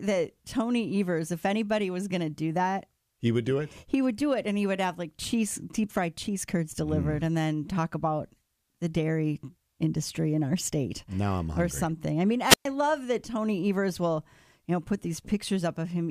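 At 12.43 s a wireless microphone squelch dropout occurs. The radio signal fades, static rises, and the receiver's squelch mutes the output for about 117 ms before the speech returns at 12.68 s.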